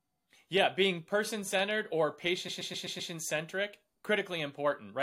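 From 2.47 to 3.11 s the speech stutters with repeated frames: a single block of about 128 ms plays six times in a row, which points to compressed frames being sent again, adding 640 ms. A waveform shows identical 128 ms segments; the spectrogram shows a repeating pattern.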